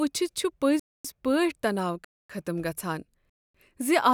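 The speech was delivered in 1-second chunks, with 250 ms of silence left at each join, a gap between chunks. No sound is lost, but the flow is interrupted by short holes at 0.80–1.05 s, 2.05–2.30 s and 3.30–3.55 s.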